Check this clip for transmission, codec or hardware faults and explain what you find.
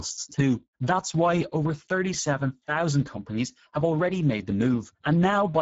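One codec fault runs through the whole speech clip. Speex codec: CELP coding with too few excitation bits, which fits a rate near 10 kbps, makes the speech plainly noisy and hoarse. There is nothing above 7.7 kHz. That grainy roughness, not warbling transform artefacts, separates it from MP3.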